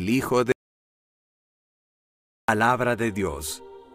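An audio dropout to silence runs from 0.52 s to 2.48 s, cutting the sound off abruptly and leaving nearly 2 s of silence with no room tone. The input was likely lost while the recorder kept writing silence, so that stretch is gone.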